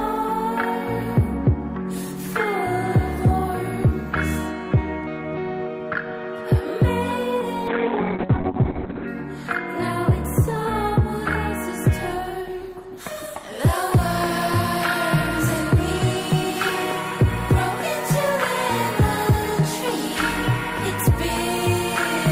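From 7.68 to 9.13 s the audio turns muffled and rough, its top end cut from 20 kHz to 4 kHz for about 1.4 s. This is a call bitrate drop: the encoder was starved of bits, consistent with falling from roughly 32 kbps to 6 kbps.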